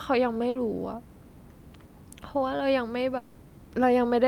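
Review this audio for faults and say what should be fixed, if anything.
At 0.49 to 0.57 s the speech breaks with a burst of packet loss. The receiver filled about 60 ms by repeating the last sound and turning it down, so a short fading continuation replaces the missing 60 ms, after which the speech jumps ahead. On a spectrogram this shows as flat, unchanging bands that fade, ending in a hard vertical edge where fresh speech resumes. A larger jitter buffer with forward error correction would help prevent it.

From 3.17 to 3.37 s the sound again freezes into a fading continuation for about 180 ms, and about 180 ms of speech never arrives. The fill runs the whole gap without falling to silence before the speech resumes further on. This is likely a long network dropout. On a waveform the envelope decays smoothly, then jumps abruptly. A more stable link or a redundant transmission path would prevent it.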